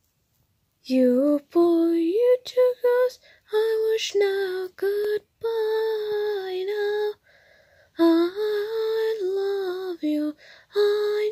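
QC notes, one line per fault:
No technical faults are audible anywhere in the audio, with the signal holding steady and continuous throughout.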